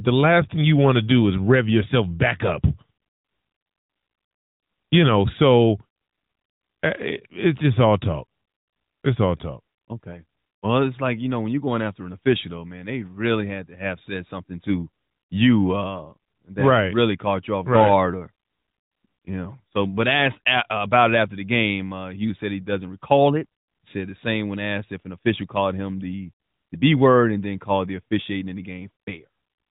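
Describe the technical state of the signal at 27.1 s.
Nothing goes wrong at 27.1 s; the speech there is intact, carried through the AMR narrowband mobile codec with its normal limit of nothing above 4 kHz.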